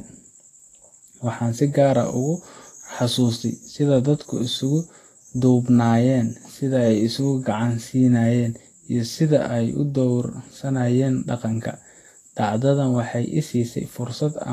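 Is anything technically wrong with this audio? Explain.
Yes. Throughout, the speech carries grainy, hissy treble with nothing above 14.2 kHz, likely from Vorbis compression at a low rate, around 32 kbps, coarsely quantising the residue. Unlike a plain low-pass, detail below the cut-off turns to noise.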